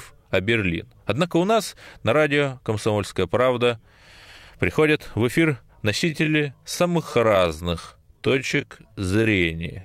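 At 5.06 s, just before "в эфир", a brief loose connector crackle appears: a worn or dirty contact momentarily breaks and remakes the signal path, chopping the speech and adding a sharp scratchy burst lasting only a few milliseconds.

From 5.95 s to the end, right after "в эфир", the pace abruptly drops to about 0.68 times normal speed while pitch stays unchanged. The dragging pace points to a likely time-stretched section, where software lengthened the audio by repeating short fragments.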